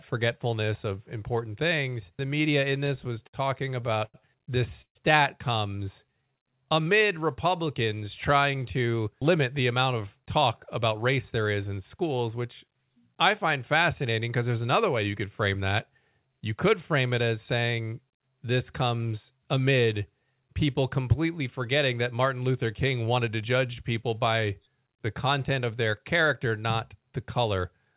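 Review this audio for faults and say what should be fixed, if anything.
Between 2.6 and 4.17 s the speech catches and drags in a stutter. Twelve short holds add up to about 250 ms, the longest 92 ms, and cover about 16% of that stretch. These are repeated stalls: packets kept arriving late, the jitter buffer kept running dry, and the receiver stretched the last sound each time. Nothing is lost, but the flow is broken.

At 4.82 to 4.98 s the sound hangs for 134 ms, fading to silence for its last 90 ms or so, then resumes where it stopped. This is a call audio freeze, likely caused by held-up packets emptying the jitter buffer and pushing the delay out by 134 ms.

From 5.76 to 6.51 s the speech slows to 88% of its pace without any drop in pitch, with drawn-out sounds. This is a jitter buffer slow-down. The receiver repeated single pitch periods to add 96 ms and rebuild its reserve.

Two stretches run hurried at 107% speed at unchanged pitch, from 8.54 to 11.38 s and from 23.16 to 23.65 s. 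This is jitter buffer speed-up. The buffer held more than its target, so the receiver trimmed short pitch-period pieces, roughly 0.2 s in the first stretch and a few tens of milliseconds in the second. All of this is heard through a narrowband call path with nothing above 4 kHz.

To prevent these faults, fix the network jitter and late delivery upstream, and give the jitter buffer a steadier target delay so it neither empties nor overfills.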